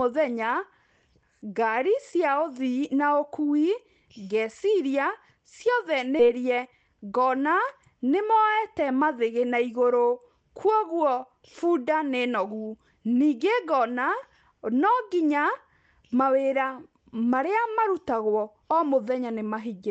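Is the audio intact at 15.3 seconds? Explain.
Yes, the audio is intact at 15.3 seconds; the speech carries no fault at that moment beyond the ordinary coding character of the call path it passed through.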